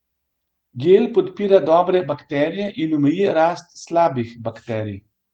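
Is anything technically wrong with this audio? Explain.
Yes. From 1.41 to 2.99 s, just before "omeji rast", there is a call bitrate drop. The encoder codes more coarsely, consistent with a fall from 32 to 18 kbps held for 1.51 s. The speech turns rough and muffled, and a spectrogram shows the high band thinning out.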